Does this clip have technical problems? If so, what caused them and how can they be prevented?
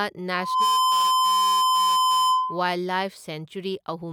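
Yes, there's a loudspeaker feedback squeal from 0.34 s to 2.76 s. A steady tone at 1 kHz swells up over roughly a third of a second and then sits around 10 dB above the speech until it cuts off. The mic is hearing the speaker it feeds, and at 1 kHz the loop gain tops one, so that tone keeps reinforcing itself. To prevent it, keep the mic behind and away from the speakers, lower the gain, or notch out 1 kHz.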